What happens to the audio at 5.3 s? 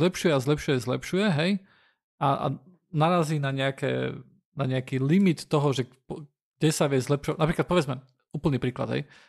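Nothing goes wrong at 5.3 s; the speech continues intact through that moment.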